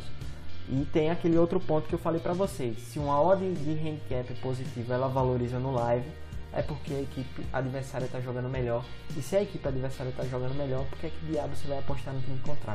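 No technical faults are audible.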